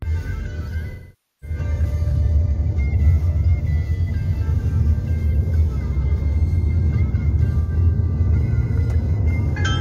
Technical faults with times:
0.90-1.57 AAC frame loss with concealment
4.02-4.08 AAC frame loss with concealment
7.61-7.72 AAC frame loss with concealment

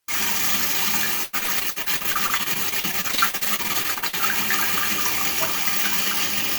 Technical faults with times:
1.23-4.15 repeated packet loss (robotic sound)

